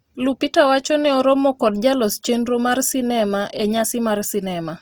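From start to finish the speech sounds grainy and rough, with a noisy sheen where clean tones should be. That's likely Opus compression in its music mode, short on bits (fits around 24 kbps), filling thin bands with noise while staying fullband to about 20 kHz.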